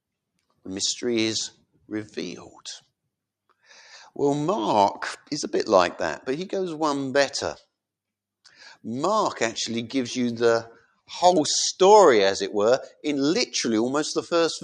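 Sound cut by the noise suppressor occurs between 10.8 and 11.1 s. The suppressor mistook part of the sound for background noise and turned it down, by about 16 dB at its deepest, so for around 150 ms the level audibly sinks.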